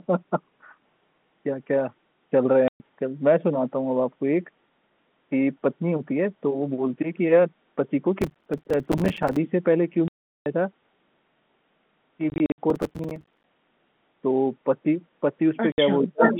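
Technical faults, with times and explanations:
2.68–2.80 s, 10.08–10.46 s, 12.30–12.58 s and 15.72–15.78 s, packet loss filled with silence: the sound drops out cleanly for 120, 380, 160 and 60 ms, with hard edges. The lengths fit 20 ms packets. At 12.3 s the 160 ms is scattered over 280 ms, with no run longer than 60 ms. These are clean holes, not a gritty texture.
8.22–9.37 s and 12.70–13.44 s, processor overload crackle: dozens of tiny silent gaps, roughly 5 ms each, arrive back to back as the processor misses buffer after buffer. About fifty gaps fall in the first stretch and forty in the second. They merge into a rough tearing crackle over the sound, unlike the single clean holes of packet loss.
16.03–16.4 s, speech suppressed in double talk: the level sinks by as much as about 35 dB over roughly a third of a second. This is likely an echo canceller ducking the talker while the other side speaks.
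16.21–16.4 s, echo leak: a delayed copy of the earlier sound arrives about 591 ms late, a little louder than the direct speech. It is likely a loudspeaker at the far end whose echo canceller let its microphone pickup through. What marks it is repeated material, not missing material.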